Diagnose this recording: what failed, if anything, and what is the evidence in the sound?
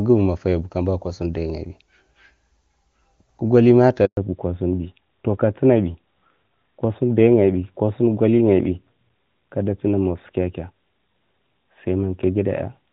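A handover gap hits the network stage at 4.05 s: the speech dies away and stays silent for 120 ms, until 4.17 s. No speech frames arrived while the call switched links, so the content from that interval is simply lost.

From 4.17 s to the end, a fallback to narrowband at the codec stage removes everything above 4 kHz. Before the switch, the HD Voice sound carries full wideband detail, consistent with AMR-WB near its top rate. Afterwards it is duller and rougher, which points to AMR-NB around 12.2 kbit/s.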